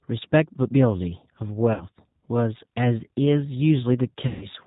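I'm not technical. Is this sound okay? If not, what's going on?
No. The whole clip passes through the G.729 codec, a phone-call format that rebuilds speech from a compact model instead of sending the actual sound. Nothing above 4 kHz survives, so the speech sounds muffled, slightly rough and synthetic throughout.

There are also two moments of VoIP packet loss concealed by the speech codec, at 1.74 to 1.84 s and at 4.27 to 4.48 s, where pieces of the call went missing. The decoder filled the gaps by stretching the last sound into a fading buzz or noise, and the speech stays weak briefly afterwards.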